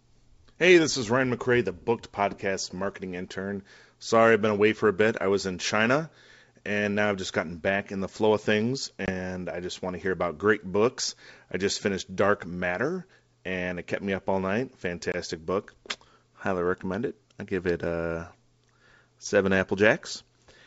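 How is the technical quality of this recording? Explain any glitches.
Two short dropouts mark the recording, at 9.06 to 9.10 s and 15.12 to 15.15 s, each typical of packet loss on an ADPCM call. About one packet, 20 ms of speech, vanishes into a hard-edged gap. Because ADPCM sends only differences, the receiver's predictor and step size lose track of the sender's. So speech returns slightly distorted, settling within some tens of milliseconds. That recovery smear separates it from a clean dropout. The wideband G.722 coding keeps speech clear to 7 kHz.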